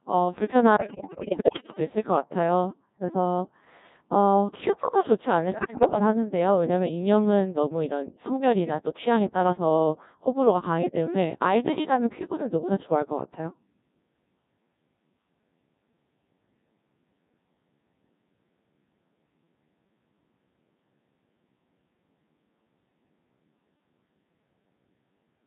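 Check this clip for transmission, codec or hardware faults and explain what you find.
Two things stand out: the whole clip runs through a very low-rate vocoder, and two short bursts get chewed up by radio bit errors.

Codec 2 vocoder, throughout: the speech is rebuilt from pitch, voicing, energy and a rough spectral envelope, then resynthesised from sine waves. The damage is heavy, with a robotic, buzzy sound, which fits Codec 2 at around 1.6 kbit/s.

Bit errors on digital voice radio, at 0.76 to 1.79 s and 5.52 to 5.99 s: flipped bits corrupt the frame parameters, roughly one bit in five in the first burst and about one in seven in the second. Pitch, level and tone colour jump around, breaking into warbles and robotic gibberish.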